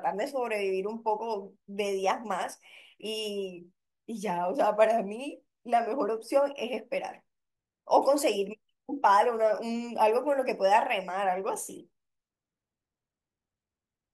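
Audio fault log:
No faults found in this speech recording.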